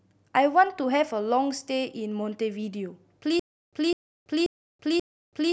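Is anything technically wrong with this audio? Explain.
Yes. From 3.40 s to the end, the speech breaks into a stutter with silent gaps: a 203 ms burst repeats four times, each followed by about 331 ms of dead digital silence, a steady 534 ms cycle. The likely cause is a stalled player replaying its last fragment at each retry. The speech that should follow is lost, and the empty gaps set this apart from a gapless loop or a simple dropout.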